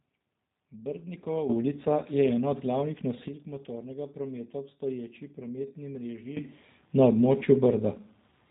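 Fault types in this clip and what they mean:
G.729 codec: The speech sounds rough and slightly synthetic, with nothing above about 3.8 kHz, which fits an 8 kbit/s G.729 stream. Unlike a plain low-pass filter, it adds a buzzy, rebuilt texture because it reconstructs the speech from pulses and filters.
Sudden gain jump: The level steps up about 10 dB from 1.49 to 3.28 s, before "motornega prometa v obstoječi", and about 17 dB from 6.37 s to the end, after "v obstoječi prometni mreži". The cause is likely an unramped gain change. Unlike a fade or compressor action, the speech and background jump together instantly.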